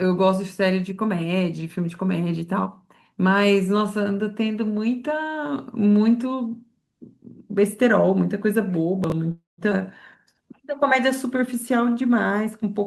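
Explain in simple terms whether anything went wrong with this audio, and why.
A few things go wrong in this speech, all bunched toward the end.

Chunks out of order, 9.04 to 9.12 s: a tiny 20 ms slice of audio turned up three slices late and got played after the ones meant to follow it. Nothing's lost, but you hear a brief jumbled blip.

Call audio freeze, 9.31 to 9.61 s: the sound holds and smears into a fading buzz for about a quarter of a second, with the last 160 ms or so going quiet. The likely cause is packets getting held up in transit, so the receiver ran dry and padded the gap. Then the speech carries on right where it stopped, with nothing missing, just a pause pushed in.

Skip ahead, around 9.70 to 9.74 s: playback suddenly jumps forward, dropping roughly a fifth of a second of speech. The two sides are stitched together almost directly, so you get an abrupt lurch as the receiver works off the delay it had built up.

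Jitter buffer slow-down, 10.35 to 12.76 s: the receiver stretched the audio to rebuild its cushion, repeating tiny bits over and over. Speech runs at about 94% speed, adding around 151 ms, so it sounds a little drawn out but keeps the same pitch.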